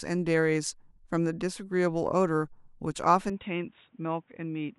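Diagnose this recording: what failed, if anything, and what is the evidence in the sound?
An input switched to a poorer device at 3.30 s, likely at the driver stage, with no gap at the switch: from there the speech turns dull, with nothing above 3.8 kHz, becomes a little quieter, and gains a faint new noise floor, as a poorer device's narrower band takes over.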